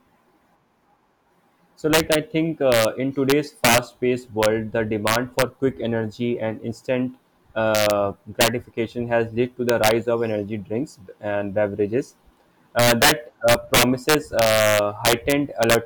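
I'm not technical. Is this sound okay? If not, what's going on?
No. Integer overflow runs throughout the clip, showing up as harsh, violent cracks whenever the speech gets loud. The signal has been pushed louder than the system's numbers can hold. Instead of being held at the maximum, each loud peak wraps around to the opposite extreme, like a car odometer rolling over. Only a small fraction of the sound goes over that limit, but every instance snaps sharply, far harsher than ordinary distortion.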